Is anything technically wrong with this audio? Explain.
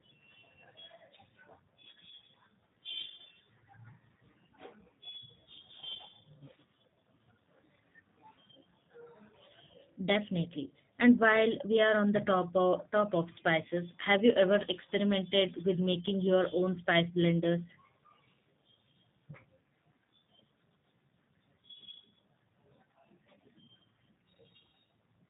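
Yes, the speech carries G.729 codec damage throughout. Nothing above 4 kHz survives, and the pulse-built excitation adds a rough, synthetic buzz that fits an 8 kbit/s codec, unlike simple band-limiting, which only sounds dull.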